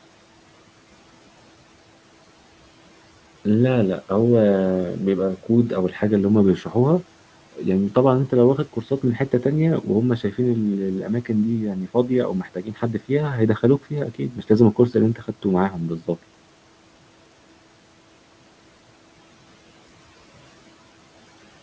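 Between 11.03 and 16.17 s (at 11.03–11.3, 12.43–13.11, 13.81–14.5, 15.15–15.45 and 15.7–16.17 s) the noise suppressor cuts speech it mistakes for room noise, turning down soft sounds by about 10 to 13 dB so they sound swallowed. Unlike a packet dropout, the audio never goes fully silent. It just fades.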